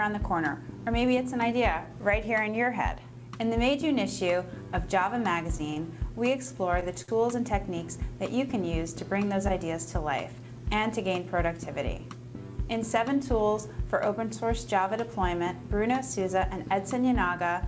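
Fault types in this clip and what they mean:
Short stall from a late packet: late packets emptied the jitter buffer, so the last sound is held for 20, 22 and 58 ms at 5.74, 6.80 and 7.02 s.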